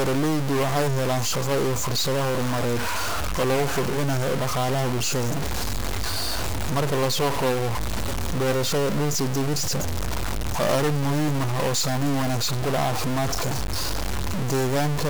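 Harsh, buzzy distortion runs through the whole speech, with noise filling the pauses; likely a stuck bit, shifting many samples by a step of about -20 dBFS.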